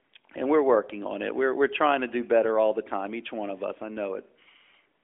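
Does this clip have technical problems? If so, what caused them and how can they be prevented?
No, there's nothing here that counts as a technical problem, so there's nothing to fix or prevent.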